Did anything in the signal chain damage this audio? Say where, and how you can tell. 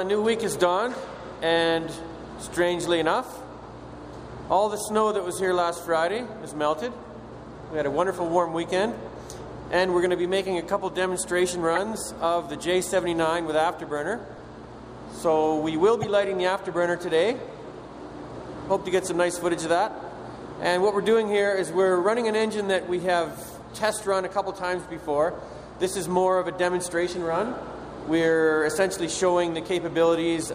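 Yes. Brief chirps and noise blips occur at 11.75–11.83, 14.36–14.39, 16.02–16.05 and 24.00–24.03 s, plus a faint tick at 28.03 s. The loudest are near 11.8 and 16.0 s. This is a codec fault, corrupt frames decoded: flipped bits misplaced spectral energy for each damaged frame's duration.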